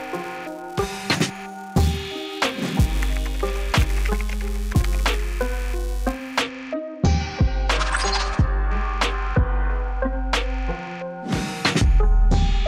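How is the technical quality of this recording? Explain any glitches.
A filter restarted on every block mars the first half. From 0.0 to 6.42 s, the filter discards its stored state at each block boundary and begins from silence, so every block opens with a small transient. These repeat as a steady 375 Hz buzz, which fits a 128-sample block, and rise and fall with the level of the sound.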